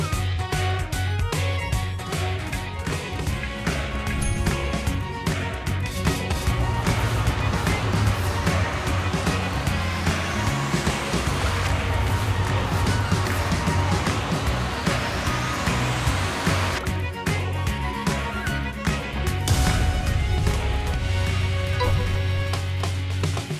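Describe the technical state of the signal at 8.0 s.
At 8.0 s the signal is intact, with no dropout, distortion, clipping or other technical fault to be heard.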